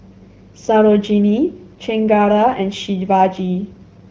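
No faults can be heard anywhere in this speech.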